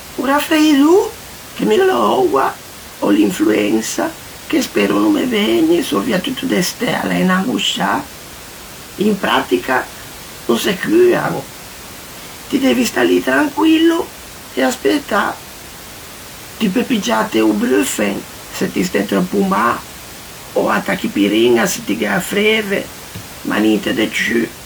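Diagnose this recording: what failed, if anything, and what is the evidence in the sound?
Nothing stood out on listening to this speech recording; the only thing beyond the speech is the room's own background noise, sitting about 18 dB below it, which belongs to the recording rather than to any stage of the system.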